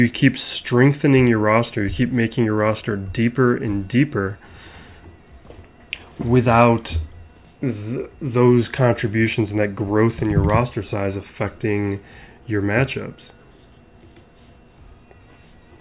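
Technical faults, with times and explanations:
No technical faults are audible anywhere here.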